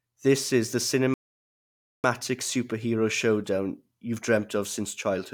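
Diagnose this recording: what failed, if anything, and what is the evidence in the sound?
A rebuffering stall at 1.14 s in the playback stage halts the speech for 0.9 s, to 2.04 s, then resumes exactly where it stopped. The player exhausted its downloaded audio and waited for more, so nothing is lost but 900 ms of silence is added.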